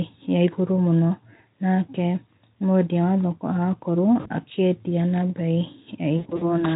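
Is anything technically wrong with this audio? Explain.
Yes. Speech packets were lost in a VoIP stream, and the speech codec concealed the gaps by extrapolating from its last pitch and filter while lowering the gain. At 4.19 to 4.30 s, just before "akĩendĩa na beĩ", about 60 ms goes missing, which fits three 20 ms frames. At 6.17 to 6.67 s, after "akĩendĩa na beĩ", about 160 ms is lost in bursts across 240 ms, the longest run 80 ms. Each gap becomes a fading buzzy or noisy smear, and the voice stays weak and distorted briefly afterward. The underlying Speex coding adds little audible damage.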